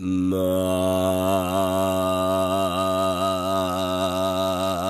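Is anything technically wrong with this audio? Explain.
No, nothing in this recording of sounds is technically wrong. No fault can be heard anywhere in it.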